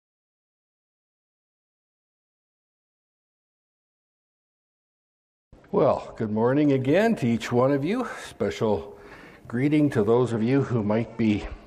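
Two Bluetooth SBC bit pool drops, 5.02–6.76 s and 10.14 s to the end. Treble dulls and grit creeps in, consistent with the link squeezing the bit pool from 31 to 11.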